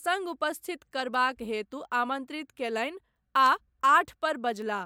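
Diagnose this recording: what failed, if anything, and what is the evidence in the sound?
A digital audio link was read by a device running on its own clock rather than locked to the sender's word clock, so the two drifted apart by something around 20 parts per million. The result is word clock ticks in the speech: short, sharp clicks of uneven strength repeating roughly once a second, about four of them between 1.14 s and 4.62 s. Each tick marks a point where the clocks slipped past each other, a single sample was dropped or repeated, and the neighbouring samples were misread.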